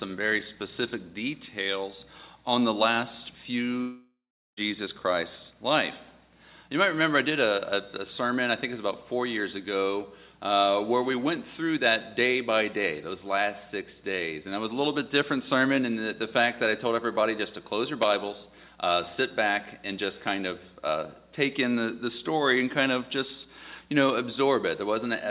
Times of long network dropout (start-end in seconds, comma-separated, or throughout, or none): 3.81-4.59